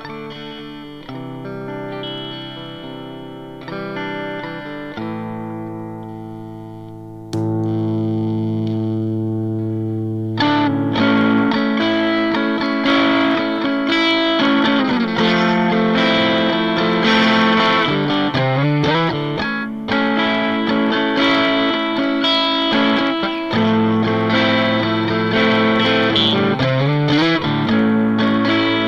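Clock slip clicks run through the audio from 0.11 s to 28.86 s as a soft, regular rattle, a slip roughly every 30 ms. Each is a single sample, likely dropped or repeated as two unsynchronised clocks drift around 700 ppm apart. A spectrogram shows evenly spaced thin vertical lines; the waveform shows tiny step discontinuities.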